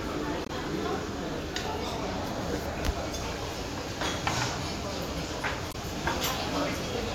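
A recording of sounds, and there are two spots where damaged data in a compressed stream breaks through: 0.43 to 0.50 s and again at 5.68 to 5.75 s. Each is a short burst of about 70 ms where the decoder hits corrupted bytes, misreads the frames, loses sync and has to hunt for the next valid frame header, so you hear a brief glitch instead of the actual audio.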